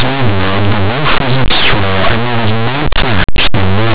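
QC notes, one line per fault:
throughout, linear audio read as companded: the speech sounds like plain linear 8-bit samples pushed through a mu-law expander, so tiny values just past zero on one side come out as the largest outputs while the other side stays small, giving constant harsh, loud distortion.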